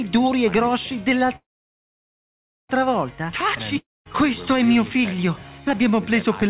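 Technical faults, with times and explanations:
1.36 to 2.71 s, call audio freeze: the sound stops advancing and the last fragment is stretched into a short fading buzz, leaving about 1.27 s of silence before the audio resumes exactly where it left off, with nothing skipped. The likely cause is packets held up in transit, which drained the jitter buffer and added about 1.33 s of delay. A waveform shows a brief decaying tail, then a flat line. On a spectrogram, content ends sharply at the 4 kHz ceiling of the narrowband call codec, which fits G.711 mu-law.
3.78 to 4.07 s, long network dropout: the audio breaks off, a brief fading buzz follows, and then there is about 0.22 s of silence. When the sound returns, about 0.28 s of material is simply gone, so the return is a jump forward rather than a resumption. The likely cause is a run of packets lost outright, with the receiver concealing the hole until concealment gave out. 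The waveform shows a short decaying tail, a flat gap, then an abrupt restart. The spectrogram shows a smeared band fading into an empty column.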